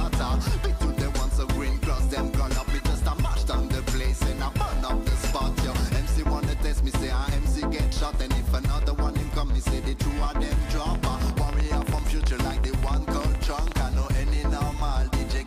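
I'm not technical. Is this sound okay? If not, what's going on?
No, there's a problem between about 10.95 and 13.73 seconds: a train of clicks. For nearly three seconds you'll hear a rapid ticking or popping laid over the sound, about ten clicks a second at an uneven pace, roughly thirty in all, and they stand out clearly above everything else. Each click sounds much like the others. The likely cause is electrical interference from nearby equipment or a faulty connection or power supply.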